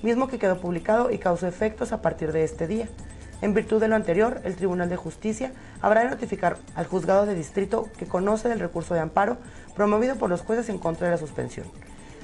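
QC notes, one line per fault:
Nothing stood out on listening, and there is nothing to flag.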